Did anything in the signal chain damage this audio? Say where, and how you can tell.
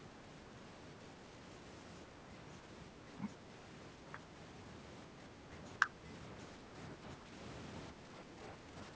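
Yes, in the call processing stage. The speech dips briefly from 5.78 to 6.04 s (roughly 10 dB), from 6.96 to 7.33 s, and from 7.92 s to the end (both nearer 5 dB). This pattern likely comes from speech suppressed in double talk, where the echo canceller ducks the near talker.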